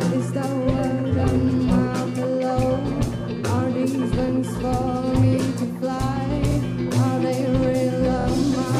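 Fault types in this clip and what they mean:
Repeated frames: a stretch of encoded audio plays again, heard as a stutter. At 6.51 s a 52 ms block repeats once; at 8.21 s a 26 ms block plays three times. Waveform and spectrogram show identical segments tiled side by side.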